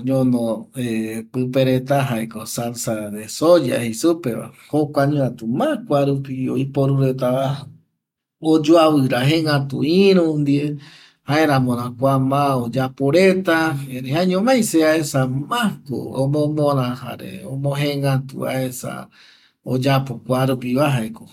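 No technical faults are audible.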